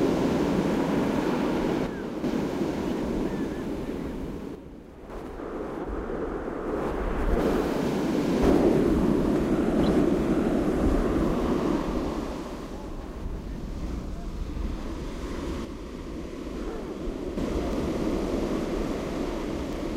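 From 1.87 to 2.24 s and again from 4.55 to 5.10 s, the sound abruptly falls by about 6 dB, likely because one channel drops out before the mono sum. The waveform envelope steps down sharply, then back up. At 9.87 s and from 11.96 to 11.98 s, a corrupt frame decoded spanning a few frames gives a brief chirp or blip, peaking around -30 and -25 dBFS. On a spectrogram these show as narrow vertical streaks of misplaced energy. From 15.65 to 17.37 s the same 6 dB level step returns and lasts longer.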